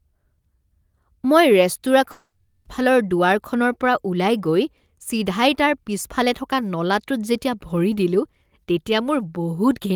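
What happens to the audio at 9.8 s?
Nothing goes wrong at 9.8 s; the audio plays through that moment intact, with no dropout, click or distortion.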